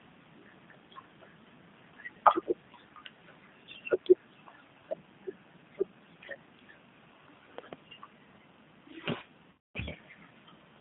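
Speech runs through a G.729 codec for its full length, with the damage plainly audible. The audio sits in a narrow telephone band of roughly 150 Hz to 3.7 kHz, with nothing above 4 kHz. At about 8 kbit/s the decoder rebuilds each 10 ms frame from a vocal tract filter, a pitch predictor and a few pulses rather than the actual waveform, so the speech stays intelligible but sounds rough and slightly synthetic throughout. A double loud pop falls between 7.58 and 7.75 s: two sharp transients stand about 5 dB above the speech, which continues underneath without interruption. This is likely a step or spike of voltage entering the chain, such as a switch, plug contact, static discharge or driver glitch, which the following circuitry shaped into two close thumps. From 9.51 to 9.78 s there is VoIP packet loss concealed by the speech codec. About 240 ms of audio went missing, which fits a run of eight 30 ms packets. 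Over that span the decoder extended its last pitch and filter state into a fading sound in place of real speech. Because each frame depends on the previous one, the voice remains weak and distorted for a short while after packets resume.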